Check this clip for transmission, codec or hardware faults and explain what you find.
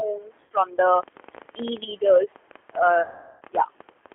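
Three faults are audible: codec coding throughout, two concealed packet losses, and a click train.

G.729 codec, whole clip: 8 kbit/s analysis-by-synthesis coding confined to 300 Hz to 3.4 kHz leaves speech rough and synthetic, unlike plain band-limiting, which stays smooth.

VoIP packet loss concealed by the speech codec, 0.44 to 0.51 s and 3.03 to 3.42 s: the decoder extrapolates its last pitch and filter through 60 ms and then 380 ms of gaps, giving a stretched sound that fades rather than silent dropouts.

Train of clicks, 0.96 to 4.13 s: roughly 40 similar pulses at about 13 per second, irregularly spaced and about 5 dB above the signal, likely interference or a faulty connection; they continue through pauses, unlike codec artefacts.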